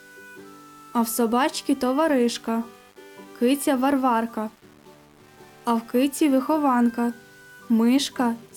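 No technical faults are audible anywhere in the audio.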